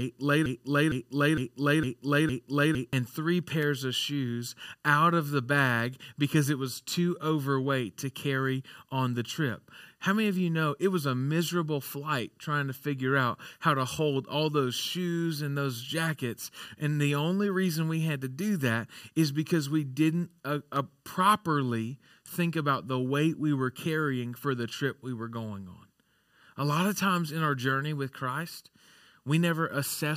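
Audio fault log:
0.00–2.93 s: broken-record loop. The clip opens with the fault already under way: a fragment of about 0.46 s (458 ms) of speech plays five times back to back, identical each time, until 2.93 s. This sound is likely a player, encoder or stream that stalled and kept resending the last piece it held. Whatever speech belonged in those seconds never arrives, so the repeats stand in for it and the real content resumes only after the loop breaks.
3.63 s and 20.76 s: dropped samples. Each is a single sharp click, the first just before "of shoes out of" and the second between "because we didn't uh" and "properly think about the". This is likely a tiny gap in the stream, a fraction of a millisecond, so the waveform jumps straight from one value to a later one. Nothing audible is removed. The discontinuity is heard as a click and would show as a thin vertical line across the spectrum.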